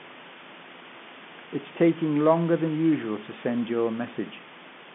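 No technical faults are audible.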